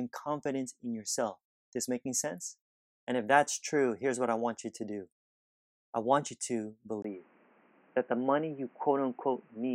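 At 7.02 s the speech abruptly turns dull and boxy and stays that way to the end, most likely because the input switched to a poorer device. A brief gap of about 20 ms marks the switch, and a new background noise floor appears roughly 35 dB under the speech, with no real change in overall level. On a spectrogram, energy above 3.1 kHz vanishes at a hard horizontal cutoff, while the waveform shows a short dropout without any shift in amplitude.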